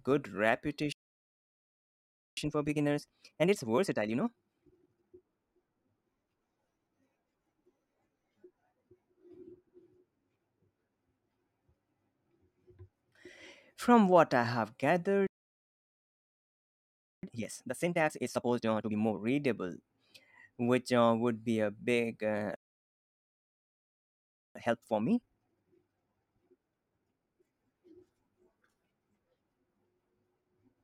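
The speech first cuts out at 0.92 s in a playback stall lasting 1.45 s. The output goes silent mid-flow, most likely because the player ran short of buffered data or its output thread was blocked. When sound returns at 2.37 s, time-compressed catch-up follows until 5.25 s. The player cuts out small slices and cross-fades across them to clear the backlog, so the speech runs at about 1.5 times normal speed with unchanged pitch.

A second playback stall follows "what I have" at 15.27 s, holding silence for 1.96 s. Catch-up from 17.23 to 19.19 s runs at about twice normal speed.

A third stall silences the output from 22.55 to 24.55 s, a full 2.0 s. After "be a big uh", catch-up then runs from 24.55 to 27.55 s at about 1.5 times speed, again at normal pitch.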